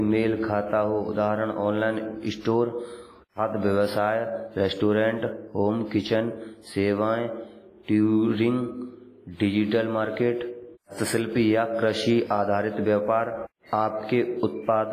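From start to end the speech carries heavy WMA compression damage, likely from a low bitrate around 24 kbps. Long transform blocks smear quantisation noise, so consonants ring and washy hiss pumps with the voice. Nothing survives above 15.2 kHz.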